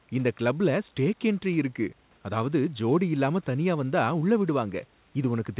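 No technical faults can be heard in this recording.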